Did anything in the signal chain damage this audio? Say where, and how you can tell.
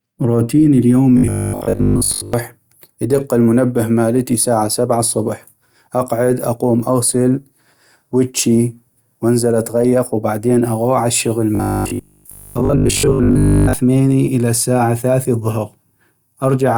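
Yes. From 1.18 to 2.34 s, and again from 11.55 to 13.73 s just after "وبعدين اغوح عالشغل", the speech turns into a rigid metallic buzz pitched at 50 Hz, with most of the real audio missing. That is robotic sound from repeated short buffers, likely at the driver or buffer stage: a 20 ms block is replayed while input stalls. Unlike 50 Hz mains hum, the buzz appears only in these stretches and still tracks the speech rhythm.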